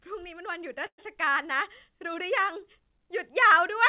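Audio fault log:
0.86–1.0 s, call audio freeze: the last sound is stretched into a fading buzz or hiss that drops to about 80 ms of silence, then the speech resumes exactly where it stopped, so nothing is lost and everything after runs 120 ms late. The likely cause is delayed packets draining the jitter buffer on this narrowband call path, where nothing reaches above 4 kHz.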